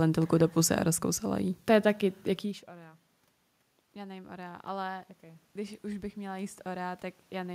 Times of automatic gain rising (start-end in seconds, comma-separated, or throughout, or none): 3.78-7.50